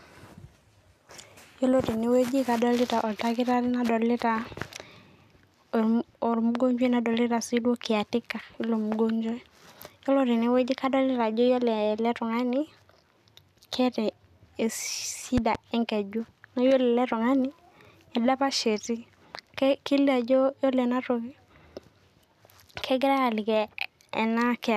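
At 15.38 s a loud pop lands on the speech, two sharp thumps within about 0.2 s, ending by 15.57 s and peaking around 10 dB above the voice. It is likely a voltage spike from a plug, switch or static. Unlike a dropout, the speech carries on underneath.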